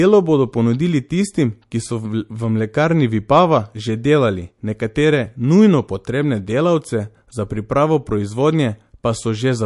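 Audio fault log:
Throughout, MP3 compression: the speech has plainly audible codec damage, with nothing above 11.3 kHz, so the top of the spectrum is sliced off at a fixed edge. Weak frequency components drop in and out from one frame to the next, giving a watery, swirling texture and metallic chirps on s sounds, while consonant onsets smear. The cause is likely a low-bitrate MP3 encode, roughly 48 kbps, starved of bits.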